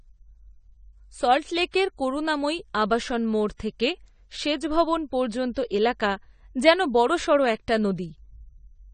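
Throughout, AAC compression, likely AAC-LC at a low bitrate near 32 kbps, strips detail, cutting everything above 9 kHz, so the speech sounds dull and smeared.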